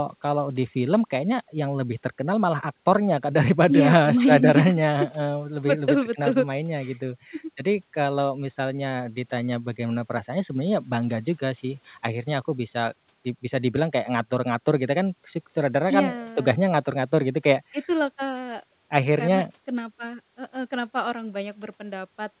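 The speech in this recording shows no technical faults, and its band stops at about 4 kHz, as expected of a telephone-grade call codec such as G.711 mu-law at 64 kbps.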